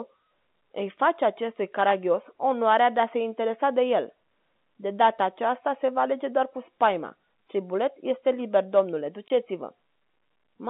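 At 9.28 s, after "liber domnule", packet loss filled with silence leaves a 20 ms hole. It shows as a flat waveform gap and a blank spectrogram column, and it has hard edges.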